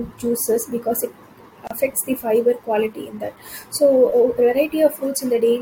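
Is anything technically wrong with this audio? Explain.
Yes, two things. Throughout the speech there's a block size mismatch, with truncation. One stage hands over longer blocks than the next one reads, and the tail of each block gets dropped. That chopping repeats at about 46.9 Hz, so you hear a low buzz riding under everything, which fits 1024-sample blocks. The speed still comes out at 1.0x, so the pacing and pitch sound normal. It's the buzz that gives it away.

Then at about 1.67 to 1.71 s, right after "juices because it" and before "the fiber quality in", there's a gap at a join of encoded pieces. The audio was encoded in separate chunks and stitched together untrimmed, so the encoder's startup delay and last-frame padding sit at the seam. You get a gap of about 33 ms with smeared edges, and then the speech picks up where it left off.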